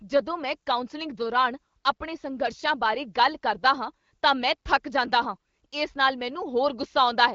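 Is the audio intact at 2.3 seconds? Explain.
Yes, the audio is intact at 2.3 seconds, with the speech carried through the AMR-WB codec at 15.85 kbit/s and no fault at that moment.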